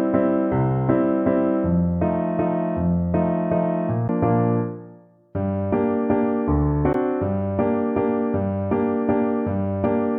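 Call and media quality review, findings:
CD skip at 4.08 s and 6.93 s: brief mute, up to 10 ms, then a tick and sudden discontinuity. Disc playback, laser pickup jumping to another turn of the spiral after a knock or disc flaw, resuming from a different position.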